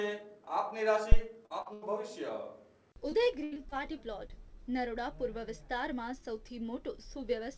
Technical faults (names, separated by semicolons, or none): phantom power thump; short concealed packet loss; burst of packet loss; repeated packet loss (robotic sound)